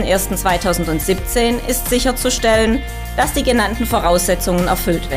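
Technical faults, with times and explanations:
Nothing stood out as a technical fault on listening.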